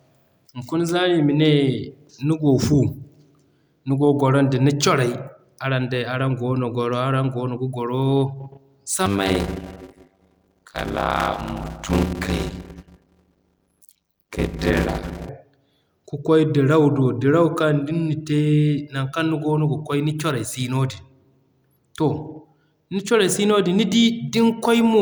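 Block size mismatch (padded), from 9.06 to 15.29 s: one stage hands over shorter blocks than the next stage reads, which fits 256-sample blocks being written into larger reads, and each block's remainder is filled with silence. That inserts a short gap in every block, heard as a 100 Hz buzz at the block rate over the speech, while the audio runs slower, at 0.533 times normal speed, for the whole stretch. The timbre is kept.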